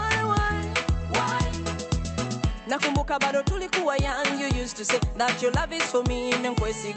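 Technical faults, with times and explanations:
No technical faults are present in this music. It has clearly passed through a WebRTC call path, and the top end stops near 8 kHz, which fits an Opus codec running at that bandwidth.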